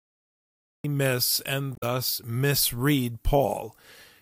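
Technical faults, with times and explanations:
0.00–0.84 s, cut-off start: the clip opens on digital silence and the speech appears abruptly at 0.84 s, already mid-sound, with no natural attack or fade-in. This is what happens when capture or streaming begins late and simply picks up whatever is already sounding.
1.74–1.83 s, damaged data in a compressed stream: a brief blip or squawk of about 90 ms cuts into the speech. Corrupted or missing bytes in the compressed stream made the decoder misread those frames and lose sync until it found the next valid frame header.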